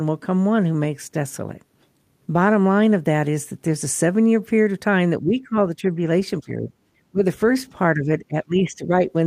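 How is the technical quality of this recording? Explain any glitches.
The speech repeatedly sinks in level during the second half of the clip, in five separate dips: 5.22 to 5.56 s, 5.78 to 6.0 s, 6.41 to 6.7 s, 7.11 to 7.22 s, and 7.95 to 8.91 s. The deepest is at 7.11 s, nearly cutting out. The one at 5.78 s is only a slight sag, and the longest, near the end, stays pulled down for most of a second. This is likely speech suppressed in double talk: with both sides talking at once, the echo canceller couldn't tell the near talker from loudspeaker echo and turned the talker down along with it.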